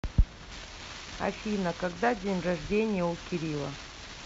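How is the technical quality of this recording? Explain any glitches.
Nothing here needs explaining, since there are no glitches to hear anywhere in the recording.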